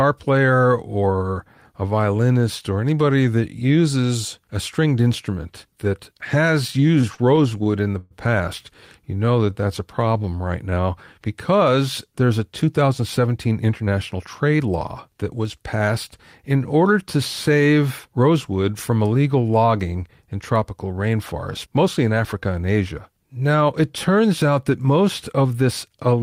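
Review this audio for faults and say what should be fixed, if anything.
From 6.67 to 8.14 s, after "a stringed instrument that" and before "past you", the audio drags and stutters through 14 brief holds, the longest 120 ms. These are repeated stalls (stutter): the jitter buffer kept running dry and the receiver stretched the last sound, filling about a fifth of the span.

Between 9.14 and 10.82 s the sound is drawn out at the same pitch, running at 88% speed. This is a jitter buffer slow-down, where repeated pitch periods add 211 ms to rebuild a reserve.

Jitter buffer speed-up makes the audio sound hurried at unchanged pitch from 12.67 to 14.68 s after "because there's a" (110%, roughly 200 ms cut), from 15.09 to 15.45 s (108%, about 40 ms), and from 25.39 to 26.17 s after "turns out that most" (109%, about 70 ms). In each case the receiver trimmed pitch periods to shed excess delay.

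To prevent these faults, stabilise packet delivery and give the jitter buffer a steadier, slightly larger target so it neither empties nor overfills.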